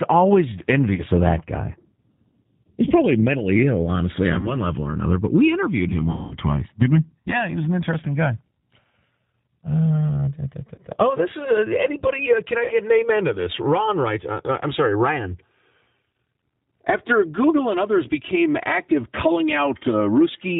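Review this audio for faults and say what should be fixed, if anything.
The speech is coded with G.729, and the damage is plainly audible throughout: a slightly rough, synthetic quality from the vocal tract filter, pitch predictor and sparse pulse model, which fits an 8 kbit/s codec. On a spectrogram nothing appears above 4 kHz. Using a wideband codec such as G.722 or Opus would prevent this.

VoIP packet loss concealed by the speech codec occurs at 0.94–1.03 s, 4.39–4.58 s, 6.11–6.37 s, 10.76–10.81 s and 12.64–12.75 s, covering losses of 40, 40, 200, 20 and 60 ms. The decoder keeps extending its last pitch and filter with falling gain, and because each frame builds on the one before, the speech stays weak or distorted after the gap. The longest gap points to about ten lost packets. On a waveform each event appears as a fading repetitive segment, and on a spectrogram as smeared, steady harmonics that decay. 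Forward error correction, a larger jitter buffer or a less congested network path would prevent this.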